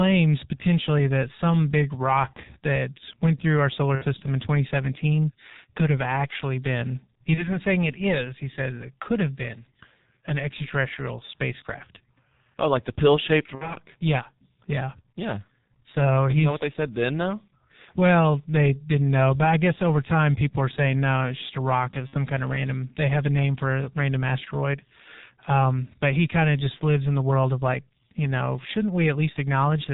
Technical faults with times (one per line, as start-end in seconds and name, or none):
0.00-29.94 G.723.1 codec
2.33-2.42 VoIP packet loss concealed by the speech codec
3.95-4.07 VoIP packet loss concealed by the speech codec
7.34-7.50 VoIP packet loss concealed by the speech codec
13.55-13.75 VoIP packet loss concealed by the speech codec
22.07-22.15 VoIP packet loss concealed by the speech codec